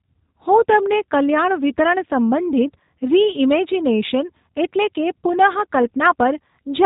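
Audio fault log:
throughout G.729 codec: speech stops at 3.8 kHz and sounds plainly rough and synthetic, as a low-rate predictive coder, likely 8 kbit/s G.729A, rebuilds it from sparse pulses.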